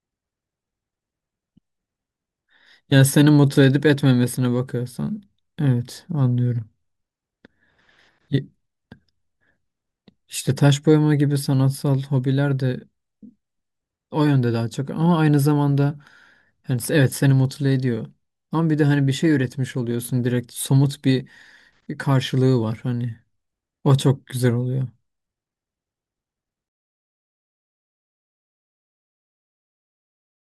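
From 26.68 s to the end, the speech fade-out shows truncation distortion on a fade: undithered gain reduction at a coarseness that fits about 10 bits. From 27.54 s it turns gritty. Unlike gate chatter, the grit grows steadily as the level falls.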